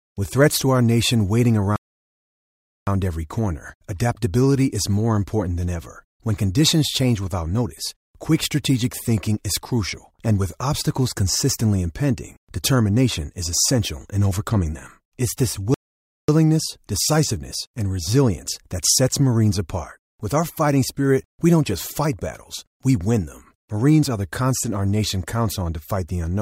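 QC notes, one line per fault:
1.76–2.87 s and 15.74–16.29 s, playback stall: the speech cuts out mid-flow and the output falls fully silent, first for about 1.1 s, then for about 0.54 s, before picking up again. A clean, total dropout of this length, rather than a click or a smeared gap, is what happens when the player has nothing to send to the output. The likely cause is that its buffer ran dry or its playback thread was briefly blocked.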